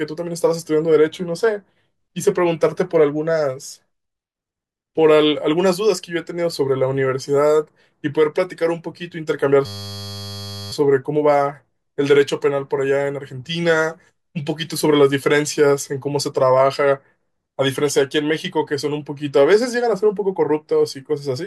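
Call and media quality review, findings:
System hang loop, 9.66–10.72 s: steady buzz at 100 Hz replacing speech. Probable component: audio driver or host stall. One 10 ms buffer segment replayed roughly a hundred times by hardware cycling the ring buffer. Speech resumes with essentially nothing lost.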